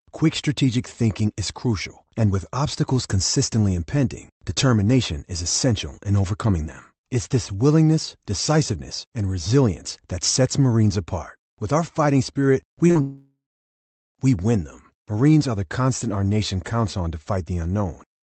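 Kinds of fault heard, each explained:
Short concealed packet loss: Right after "our fighting spirit we", two back-to-back gaps near 12.87 and 12.91 s, about 20 ms and 40 ms, were patched by continuing the preceding sound. The result is a brief smear, unlike a dropout.
Long network dropout: From 13.01 to 14.17 s, about 1.14 s of audio is missing. A continued buzz or hiss fades into roughly 0.76 s of silence before "we win them" resumes, likely from a network dropout, and the skipped stretch never returns.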